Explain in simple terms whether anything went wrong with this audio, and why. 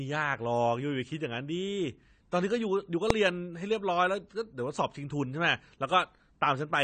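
Invalid numbers at full scale at 3.10 s: a calculation briefly produced impossible values, and the audio jumped to an extreme value far beyond the speech's peaks for a tiny moment, under a thousandth of a second. That block is far too short to hold any sound, so it comes across as a single bang in the speech.

AAC compression runs through the whole clip. The damage is plainly audible and is likely from saving the audio in a small AAC file, which shrinks it by discarding detail a listener is expected to miss and roughens the speech in the process.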